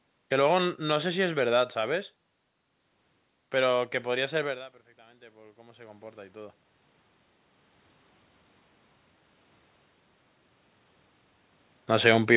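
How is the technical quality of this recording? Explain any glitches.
One glitch stands out: the level of the recording is pulled upward partway through. Throughout, the call path keeps nothing above 4 kHz, consistent with G.711 mu-law telephone coding.

From 4.95 to 6.63 s there is automatic gain rising. Around 4.5 s the talker moves away and the input falls by about 21 dB. The gain control treats this as a quiet source and gradually adds about 8 dB. Over roughly 1.7 s the voice and the room noise behind it swell up together, so the background becomes audibly louder along with the speech.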